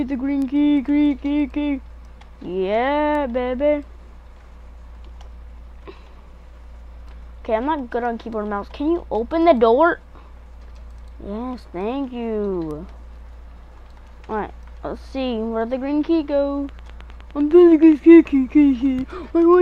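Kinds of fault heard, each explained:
Train of clicks: a burst of evenly spaced ticks runs from 16.69 to 17.93 s, about 9.7 per second, roughly fifteen in all, each about as loud as the audio itself. Something likely kept injecting a short pulse, maybe interference or a faulty connection or power supply.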